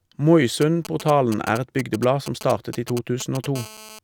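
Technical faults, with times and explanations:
0.62 to 3.46 s, GSM signalling bursts: a galloping dit-dit-dit of short raspy buzzes cuts in over the speech, sitting roughly 10 dB below it. The pattern points to a 2G phone close by that is exchanging brief control traffic with the network rather than carrying a call. Within each group the radio pulses repeat at 217 Hz, and the audio circuitry rectifies that RF envelope into audible clicks and buzz fragments.
3.56 to 3.99 s, GSM phone buzz: the sound changes to a continuous, hard, raspy buzz at 217 Hz, rich in harmonics and about 18 dB below the speech, with no relation to what is being said. The steady character suggests the same nearby handset has moved into an active call and is transmitting its time-slot bursts 217 times a second. A nonlinear junction in the audio path demodulates those pulses into the buzz.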